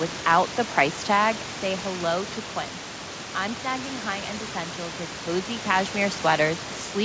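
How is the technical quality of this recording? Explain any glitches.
No glitches: the level moves smoothly where it changes, room noise sits about 13 dB below the speech, and the G.722 call path at 64 kbps leaves nothing above 8 kHz, as that codec does by design.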